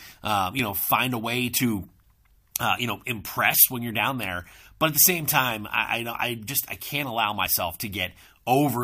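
At 0.59 s there is an overlap between stream segments. Two adjacent segments of the stream carried time stamps that overlapped, and on playback the overlapping portion was trimmed away, although that audio had not actually been duplicated. Roughly 11 ms of the speech is lost, and the waveform jumps directly from the end of one segment to the continuation of the next. It is heard as a brief skip. The position fits a segment boundary near 0.6 s, consistent with segments about 1 s long.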